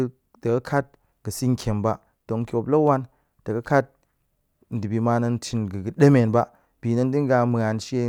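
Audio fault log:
No technical fault can be heard anywhere in the speech recording, and the signal holds steady in level and continuity from its first moment to its last.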